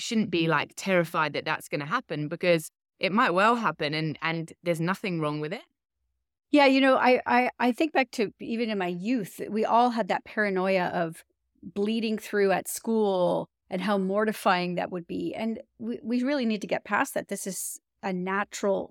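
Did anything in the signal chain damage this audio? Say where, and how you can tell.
No, nothing in the signal chain damaged this audio.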